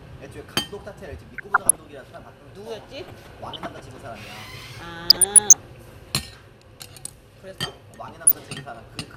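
Weak DAB reception let bit errors slip past the error correction into the MP2 data of this sound recording, so corrupted samples put short blips of noise into single sub-bands and corrupted scale factors make sub-bands jump in level for up to a frame. The result is DAB burbling over the sound from 1.33 to 1.93 s, 3.08 to 3.85 s, 5.07 to 5.78 s and briefly 8.24 to 8.37 s, consistent with an error rate below one percent.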